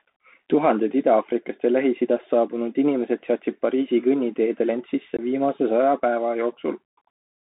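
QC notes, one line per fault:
Throughout: Bluetooth CVSD headset codec. The speech sits in a narrow 200 Hz to 3.7 kHz band, with the one-bit delta coding plainly audible as granular hiss under the voice, scratchy sibilants and slope-overload distortion where loud high-frequency energy outruns the adaptive step size.
5.17 to 5.21 s: unconcealed Bluetooth headset packet loss. Between "kõnniteedel end" and "viimase saja päeva" about 19 ms of audio drops out, which fits a handful of lost voice packets replaced by silence, leaving a hard-edged hole, with the level briefly lower on return.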